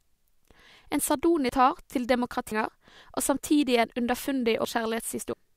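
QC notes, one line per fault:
1.49 s, 2.52 s, 4.65 s, 5.33 s: compressed frames skipped. The speech jumps ahead with no silent gap, losing about half a second each time except about a second at 2.52 s, which fits runs of roughly 85 ms frames.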